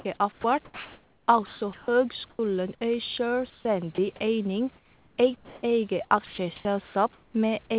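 A speech recording over a narrowband call path, with nothing above 4 kHz. The sender's voice detector likely misjudged speech as background and stopped sending, so sound dropped by the voice detector is heard at 0.0–0.05 s, 2.3–2.39 s and 3.95–3.98 s, where brief slices of speech give way to steady synthetic noise. The same detector likely toggled repeatedly, producing sound chopped by the voice detector from 0.32 to 1.88 s and from 6.26 to 7.34 s, with about 1.05 s and 0.51 s of speech replaced by fill, so the speech turns choppy. During pauses, discontinuous transmission likely cut the stream, and comfort noise in place of the background fills 3.5–3.65 s, about 3 dB quieter and featureless, and again 4.76–5.63 s for roughly 0.7 s. At the end of that pause the detector was likely slow to reopen, so an onset clipped by the voice detector at 5.61–5.63 s loses 20 ms and the word starts abruptly.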